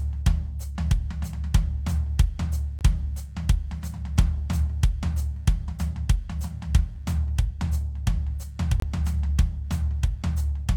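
Throughout the music, computer activity noise is present: processor, graphics or mouse load shifts the ground that the audio circuit shares, injecting a faint buzzing chirp that pulses around 100 times a second, roughly 45 dB below the music, tracking the computer's activity rather than the sound.

Twice, a gap between stream segments appears: the time stamps of consecutive segments, which fit 2-second chunks, fail to meet, and the player pads the difference with silence. Hard-edged holes of about 19 ms at 2.79–2.81 s and about 23 ms at 8.80–8.82 s interrupt the music.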